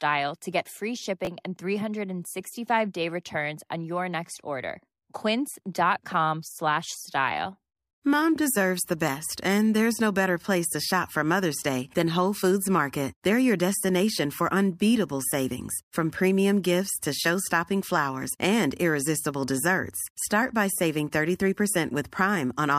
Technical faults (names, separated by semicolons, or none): chunks out of order